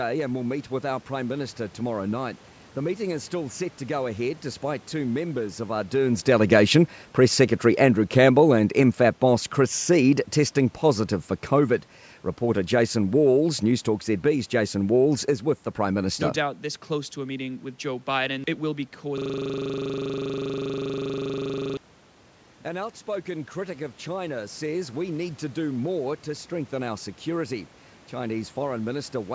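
From 7.64 s to 16.07 s the level sinks steadily as an automatic gain falling fault pulls the gain down by about 7 dB. The gain control judged the input too loud or its background noise too strong and backed off gradually, so the speech and the room noise beneath it fade together. On a waveform the envelope tapers smoothly across those eight seconds. A spectrogram shows every band, including the noise floor, dimming evenly, which separates it from a talker simply moving away.

At 19.18 s the audio locks into a system hang loop that lasts until 21.77 s. The computer or driver stalled while the sound hardware kept replaying the same 40 ms buffer, repeating it 65 times. This gives a harsh, rigid buzz at 25 Hz in place of speech. The waveform shows one identical short segment tiled end to end. The spectrogram shows a frozen frame repeated as regular vertical striping, with harmonics spaced 25 Hz apart.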